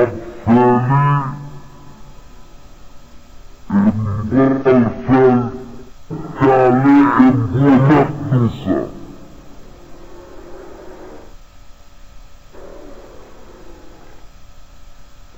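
From start to finish this is stereo read as mono: the interleaved left and right samples run as one channel, so everything plays at half speed, a full octave low.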